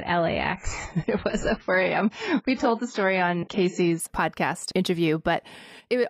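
Adaptive stream starting at a low bitrate, 0 to 4.0 s of this speech: nothing above 7.7 kHz and heavier codec artefacts, which fits about 16 kbit/s AAC, then a gapless jump to fuller quality.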